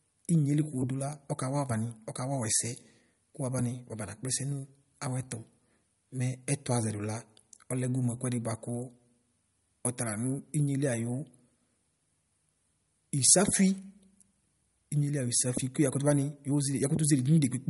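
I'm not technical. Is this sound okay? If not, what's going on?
No. The speech sounds watery and swirly from start to finish, with s sounds turning metallic and dull, and nothing above about 11.2 kHz. The likely cause is heavy MP3 compression, which discarded treble and fine detail to save space.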